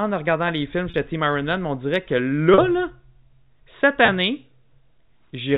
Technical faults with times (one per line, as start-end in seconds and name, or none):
0.90-0.94 packet loss with pitch repetition
2.54-2.58 packet loss with pitch repetition
4.06-4.08 packet loss with pitch repetition